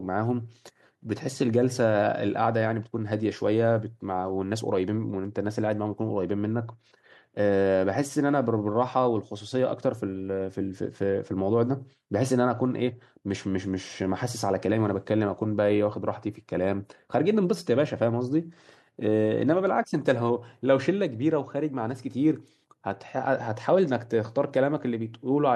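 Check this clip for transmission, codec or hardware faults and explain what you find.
No faults turn up anywhere in the clip.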